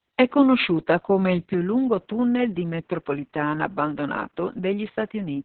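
From the first moment, the speech carries Opus voice compression at a very low rate, about 6 kbps, in SILK mode with a narrowband setting and long 60 ms frames. Coarse excitation coding makes it hoarse, muffled and faintly robotic, and this stays constant across the whole clip.

At 1.54 s the sound abruptly turns duller and about 5 dB quieter, losing everything above 3.8 kHz, with a faint new noise floor and no gap. This is likely an input switched to a poorer device. Unlike the codec's steady coloration, it is a sudden step that persists to the end.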